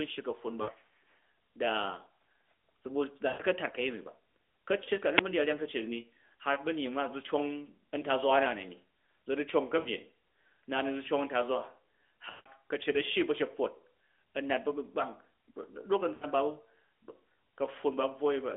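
Lost AMR speech frames break the speech seven times: at 0.62–0.70, 3.28–3.43, 4.84–4.91, 6.54–6.59, 9.80–9.87, 12.30–12.49 and 16.14–16.27 s. Radio errors corrupted the frames. The decoder filled each gap by repeating the last good pitch and vocal tract settings at falling gain. The 20 ms gap at 6.54 s is a brief dip or warble. Longer gaps, up to 160 ms at 12.30 s, smear into a drawn-out, fading tone before the voice returns. The narrowband line keeps the speech between 250 Hz and 3.5 kHz.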